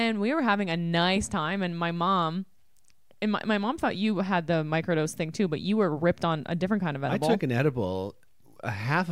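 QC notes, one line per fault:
Nothing to flag here; I listened to the whole speech clip and didn't hear a single problem worth noting.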